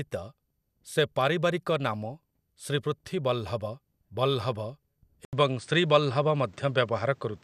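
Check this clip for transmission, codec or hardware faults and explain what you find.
One fault is present. An input switched to a poorer device at 5.25 s and holds to the end: after an 80 ms gap the speech loses everything above 9.3 kHz, changes level by about 5 dB, and gains a new noise floor around 35 dB down, likely from the system changing microphones.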